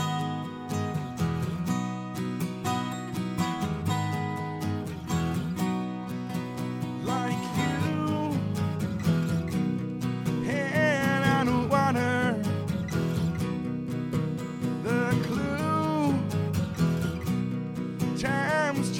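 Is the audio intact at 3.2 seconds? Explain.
Yes, the audio is intact at 3.2 seconds, with no dropout, click, distortion or other fault at that point.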